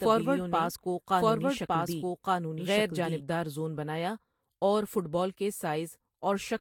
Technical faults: generation loss; doubled audio track

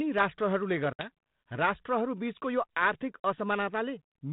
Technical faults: packet loss on an ADPCM call

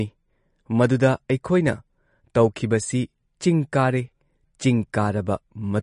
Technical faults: MP3 compression

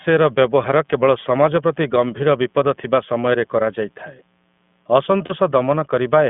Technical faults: iLBC codec; lost iLBC frames

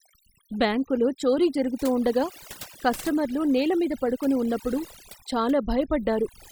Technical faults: overdone noise removal

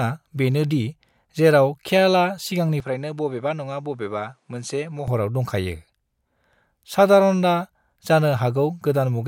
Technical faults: input switched to a poorer device

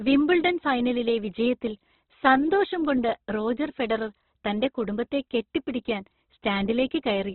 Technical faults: Opus compression

